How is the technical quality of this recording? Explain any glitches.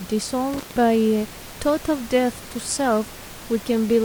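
The recording has one glitch, an intermittent contact between 0.54 and 0.76 s. A loose cable or plug briefly lost its connection, opening the line for about 156 ms. The speech drops out abruptly, with crackle at both edges and faint hiss across the gap. The room noise, about 18 dB below the speech, is a normal part of the recording.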